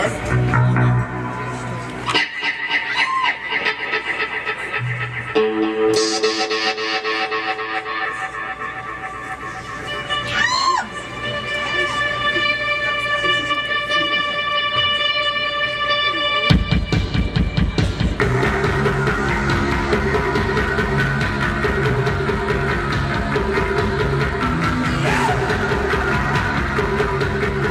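Around 8.05 to 8.07 s, a stretch of roughly 0.7 s of audio was discarded while later material was already queued, either lost in transit or flushed by an overfull jitter buffer, and playback resumed from the newer audio. This is a skip ahead: nothing fills the join, so the sound lurches forward abruptly with no audible silence, the two sides spliced almost directly, and the playback delay drops by about the same amount.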